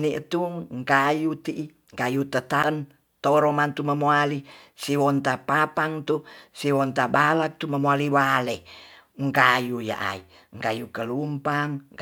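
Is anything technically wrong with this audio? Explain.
Yes. At 2.63 s there is a CD skip: a knock or disc flaw threw the laser onto a different turn of the spiral, so the player muted for a few milliseconds and resumed elsewhere. It sounds like a tiny tick followed by an abrupt jump in the speech.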